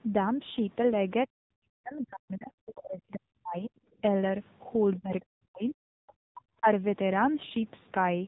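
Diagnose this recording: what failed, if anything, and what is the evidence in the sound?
At the codec stage, AMR narrowband mobile coding cuts everything above 3.8 kHz and leaves the speech heavily buzzy and synthetic, pointing to a rate near 6.7 kbps.

In call processing, speech was likely suppressed in double talk. The echo canceller treated the talker as echo, dropping the voice deeply from 1.26 to 3.82 s and from 4.98 to 6.67 s.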